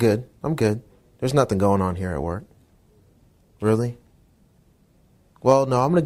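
No faults can be heard anywhere in the audio.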